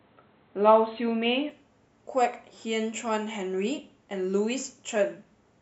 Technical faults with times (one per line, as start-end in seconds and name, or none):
0.00-1.50 input switched to a poorer device